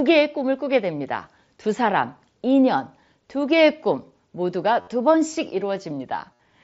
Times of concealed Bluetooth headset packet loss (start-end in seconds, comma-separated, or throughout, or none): 4.81-4.87, 6.33-6.39